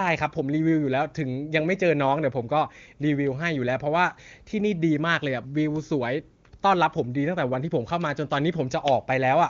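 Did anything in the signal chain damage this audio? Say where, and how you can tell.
No, nothing in the chain audibly damages this speech. It has passed through the AMR wideband (HD Voice) codec, heard as a top end that stops around 7 kHz with no roughness or rasp, which fits the codec's highest rate of about 23.85 kbit/s.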